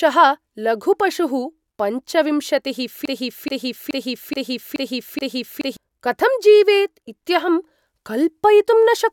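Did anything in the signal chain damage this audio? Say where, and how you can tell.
Yes. From 3.05 s to 5.77 s, right after "लघुः पशुः पञ्चविंशतिः", the speech falls into a broken-record loop. A 0.43 s fragment repeats exactly six times, back to back, before "कथं जीवेत्" resumes, and whatever should have played in that span is lost. The likely stage is playback or stream buffering, where a stalled buffer keeps re-sending its last block. On a waveform, identical 0.43 s shapes tile back to back. On a spectrogram, one pattern repeats at a rigid period.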